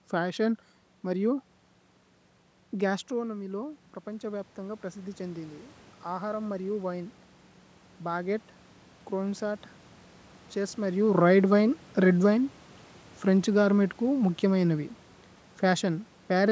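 Automatic gain rising, 3.18 to 7.2 s: the input fell about 10 dB, so the control added about 6 dB, swelling voice and room noise together.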